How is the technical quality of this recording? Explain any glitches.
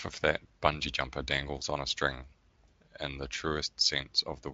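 No glitches or faults audible.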